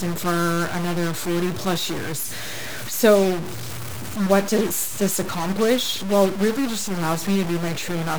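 From start to finish the speech carries a harsh, buzzy distortion that rides on every syllable, and the pauses between phrases never go quiet but fill with a steady grainy noise. This is likely a stuck bit: one bit in the sample data held at a fixed value, so about half the samples are knocked off by a step around -25 dBFS. Because that bit sits fairly high, the noise in the gaps is quite loud.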